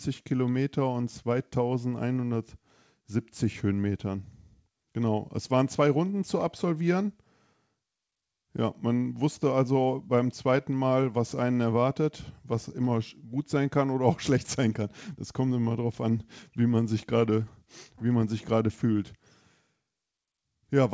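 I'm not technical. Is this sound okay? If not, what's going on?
Yes, the sound is okay; nothing is wrong with it.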